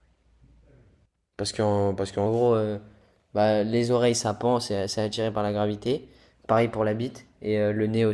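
From 2.26 s to the end, wrong sample rate: audio recorded near 22 kHz plays as if 24 kHz. Speech runs 1.09 times fast, pitched about 1.5 semitones high.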